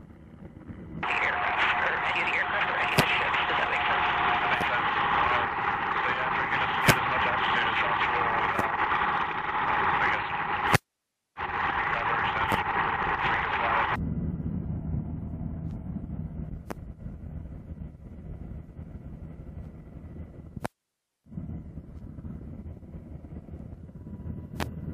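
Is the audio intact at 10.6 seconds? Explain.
No. Between 10.57 and 10.59 s the audio shows compressed frames skipped. About 50 ms of material never plays, which fits a single compressed frame of roughly 46 ms being lost from the file or rejected by the decoder as damaged. The sound jumps forward by that amount, leaving a hitch in continuity at the splice where the missing slice should be.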